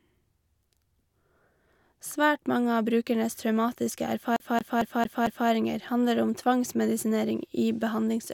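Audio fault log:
4.36–5.49 s, CD stuck on one turn: a scratch throws the laser back one track each rotation, so the same 0.23 s of speech plays five times with a brief mute at every jump; waveform and spectrogram show identical blocks separated by thin, evenly spaced gaps.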